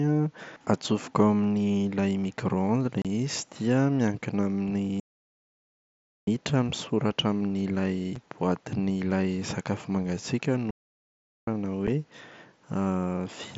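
A hard-edged hole of about 30 ms cuts the speech at 3.02 to 3.05 s, which fits several lost packets. Shorter gaps follow at 8.16 s, between "misoratra amin’ny" and "boatin’ilay sakafo mangatsiaka", and at 11.87 s. This is unconcealed Bluetooth headset packet loss: voice packets between headset and phone never arrived and were replaced by silence or an idle pattern.

The sound also halts outright from 5.00 to 6.27 s, resuming with "misoratra amin’ny", and again from 10.70 to 11.47 s, after "boatin’ilay sakafo mangatsiaka". These are playback stalls, likely the player starving for data until it recovered.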